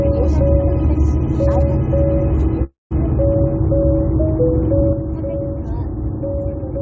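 Call audio freeze, from 2.64 to 2.94 s: the sound stops moving forward and the last fragment is stretched into a short buzzy tail that fades, leaving about 170 ms of silence before the audio picks up exactly where it left off. This likely came from packets arriving late enough to drain the jitter buffer. Roughly 270 ms was filled in rather than dropped, so nothing is lost, but everything afterwards runs about 270 ms later.

Sudden gain jump at 4.93 s: the level drops by about 6 dB in a single step and stays down until the clip ends. The sound and its background noise fall together, with no fade, which points to a digital gain change applied without a ramp, likely a setting or bit shift switched mid-stream. Throughout, the call path's band limit is audible as nothing above 8 kHz, which fits G.722 at 64 kbps.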